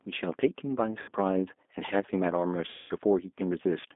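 It's a speech clip that has gone through the G.729 codec at 8 kbit/s, and the damage is plain to hear. Everything sits roughly between 250 Hz and 3.6 kHz, and the voice has that rough, slightly synthetic edge you get when speech is rebuilt from a filter, a pitch predictor and a few pulses per frame. There are also two spots of VoIP packet loss concealed by the speech codec. From 1.02 to 1.10 s, about 60 ms of audio is missing, which points to around three lost packets. From 2.70 to 2.93 s, a longer gap of about 200 ms is missing. In both spots the decoder stretches the last pitch and filter into a buzzy tone or coloured noise that fades, and the voice stays weak or smeared for a moment after the audio returns.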